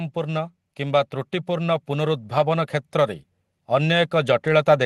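From 0.13 to 2.77 s, automatic gain rising: the gain control judged the input too quiet and raised it by about 4 dB, so voice and background swell together.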